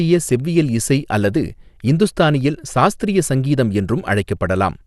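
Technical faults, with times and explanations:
Throughout, MP2 compression: the speech sounds dull, with nothing above about 12.2 kHz, and carries a plainly audible gurgling, granular distortion. This is likely low-bitrate MPEG Layer II coding, which fits roughly 80 kbps. Starved of bits, it switches off upper sub-bands and coarsely quantises those it keeps.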